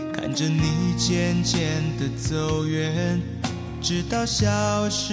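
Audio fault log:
No audible faults detected.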